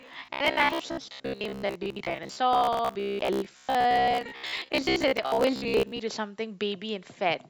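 From 0.02 s to 6.00 s, fresh audio is likely reaching the playback software too seldom, so it fills the gaps by looping its last short buffer of about 15 ms while the real audio between is dropped. Roughly half of what's heard in that stretch is repeated material. The loop stamps a fixed 66.7 Hz buzz onto the speech, giving robotic sound from repeated short buffers: a rigid, metallic drone that only loosely tracks the words.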